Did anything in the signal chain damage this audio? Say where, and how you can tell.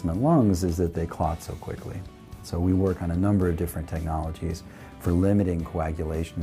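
No, nothing in the chain audibly damaged this audio.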